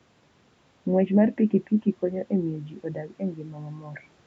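No technical faults are present in the speech: the call's microphone processing trims the lowest bass and leaves nothing above 8 kHz, and the room's background noise sits about 41 dB below the speech.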